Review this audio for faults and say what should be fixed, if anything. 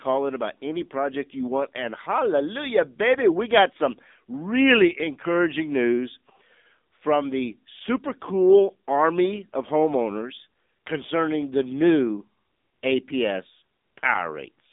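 Throughout, the speech sounds thin, boxed-in and buzzy, with a synthetic edge and nothing heard above 3.8 kHz. That is the AMR narrowband mobile codec at work: AMR-NB rebuilds each 20 ms frame from a vocal-tract model fed by a few pulses, and the plainly audible damage fits a low mode near 7.4 kbps, inside a 200 Hz to 3.7 kHz line band. Capture or route the call over a wideband path instead of AMR-NB.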